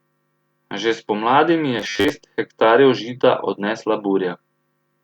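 A speech clip with robotic sound from repeated short buffers between 1.79 and 2.10 s. There the voice hardens into a rigid, metallic buzz at a fixed 100 Hz, which points to a 10 ms slice being looped, with about half the material replaced by repeats. The likely cause is audio arriving too late, so playback fills the gap. Unlike a plain dropout, no silence appears, and unlike flanging, the buzz stays at a fixed rate rather than sweeping.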